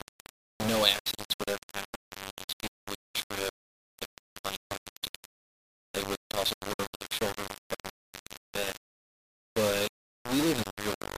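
From start to finish the sound is coated in a coarse, grainy distortion that moves with it, swelling and changing character as the level shifts, and it sits only a few decibels below the sound itself. Quiet passages break up into gritty sputtering. This is likely low bit depth without dither: the audio was rounded to very few amplitude steps, which fits about 4 bits, with no added noise, so the error tracks the signal instead of staying a steady hiss.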